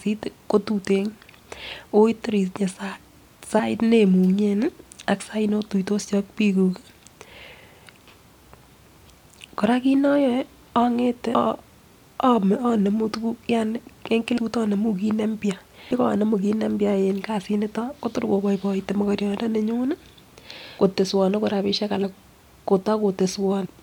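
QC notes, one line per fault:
3.58 s, 14.36 s, 15.90 s, 22.02 s, 23.65 s: compressed frames skipped. The speech jumps ahead at each point, losing roughly 70 ms, 300 ms, 300 ms, 70 ms and 200 ms of audio, because whole coded frames were missing or rejected by the decoder. Unlike a dropout, there is no silent gap, only sound that is suddenly further on.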